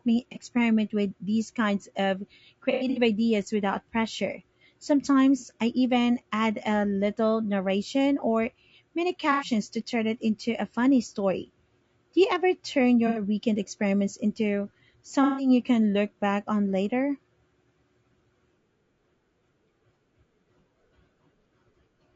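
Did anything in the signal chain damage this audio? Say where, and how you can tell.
Yes. The codec stage, likely low-delay AAC compression at a low bitrate around 32 kbps, short frames blurring harmonics, leaves the speech rough and grainy throughout, with noise between harmonics.

On the network side there is AAC frame loss with concealment at 0.32, 2.72 to 2.98, 5.39, 9.32, 13.07, 15.23 to 15.49 and 21.41 s. The decoder refills missing spectra from the last good frame, so each gap is papered over rather than left as silence.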